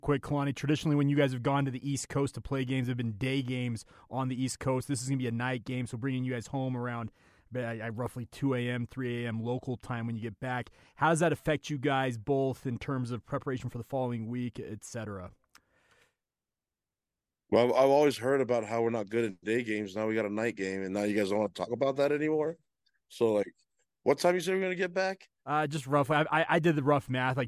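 No technical faults can be heard anywhere in the recording.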